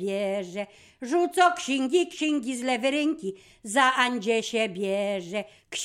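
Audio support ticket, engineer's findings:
No faults found in the signal path; nothing audible to attribute to any component, ticket can close without a fix.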